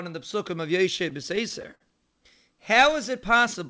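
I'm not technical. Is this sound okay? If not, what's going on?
No. From about 0.84 to 1.82 s, right after "in the psukim of", the speech has repeated stalls (stutter). It catches eight times in under a second, and each hitch briefly stretches the sound it was already making. The longest lasts about 56 ms. The audio reached the listener's end too slowly, so playback kept running dry and filling the pauses. Unlike dropouts, nothing is actually lost: the speech just drags and trips. The call line, which points to a G.722 codec, also leaves nothing above 8 kHz.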